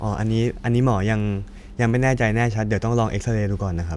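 From 0.80 to 2.30 s, a resampler restarted on every block puts ticks at a steady 10 Hz, following 100 ms block edges. Unlike random clicks, they stay regular and sound only with signal.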